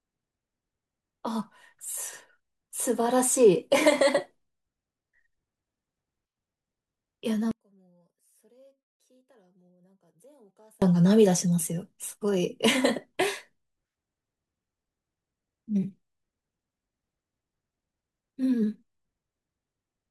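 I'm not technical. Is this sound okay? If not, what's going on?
No. From about 7.51 to 10.82 seconds, the speech nearly disappears, dropping to a faint trace. This is likely one channel inverted: one side of the stereo signal is flipped, so the two sides cancel each other when combined.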